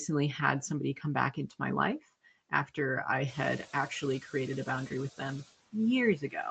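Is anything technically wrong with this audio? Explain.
Yes, the speech carries processing faults from a noise suppressor.

Noise suppressor artifacts: Throughout, the background pumps down in the gaps and swells back under the talker. A suppressor is pulling bands it judges to be steady noise down by about 19 dB, frame by frame. This works against the room noise, which rises by about 14 dB around 3.5 s.

Speech cut by the noise suppressor: At 1.34 to 1.61 s, 2.50 to 2.78 s and 6.18 to 6.35 s, parts of the speech briefly sound swallowed, roughly a tenth of a second each time, dipping about 11, 13 and 12 dB. Here the suppressor mistook quiet speech for noise and turned it down with the background. The audio is band-limited to 8 kHz, as expected from an Opus call path at what sounds like a moderate bitrate.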